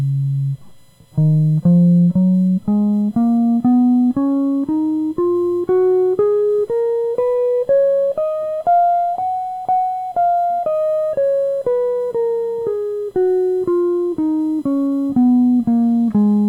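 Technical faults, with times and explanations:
Throughout, USB whine: a steady 1 kHz tone sits faintly beneath the music, around 45 dB down, strongest at its 4 kHz harmonic. It comes from the bus's 1 ms frame rate leaking through power or ground, far above mains hum's 50 or 60 Hz.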